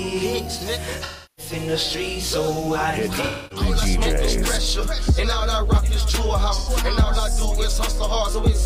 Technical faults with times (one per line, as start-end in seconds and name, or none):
1.03-1.53 AAC frame loss with concealment
3.25-3.66 AAC frame loss with concealment
6.58-6.69 AAC frame loss with concealment